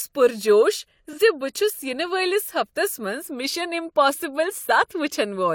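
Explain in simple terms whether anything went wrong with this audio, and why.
AAC frame loss with concealment at about 1.09 to 1.19 s: one chunk of the speech went missing, and the decoder patched the gap with a brief smeared, noisy guess.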